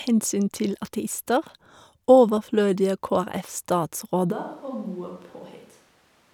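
At 4.34 s the speech abruptly goes roomy and hollow and stays that way to the end. The bass thins out, the level falls by about 10 dB, and background room noise comes up to sit maybe 25 dB below the voice. That sudden change in character points to a switch to a distant microphone, most likely the close mic dropping out and the recording falling back on something further off, like a camera mic.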